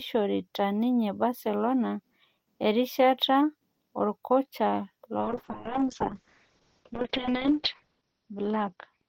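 Speech, with a call bitrate drop from 5.21 s to the end of the clip. The encoder was forced to far fewer bits, which fits a fall from 32 to 6 kbps. Audio bandwidth shrinks from 20 kHz to 6 kHz. The sound turns muffled and coarse, bottoming out for 2.35 s.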